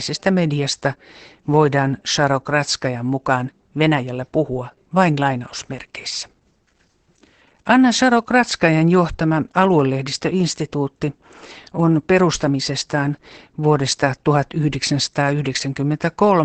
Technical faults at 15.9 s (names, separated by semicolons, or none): Opus voice compression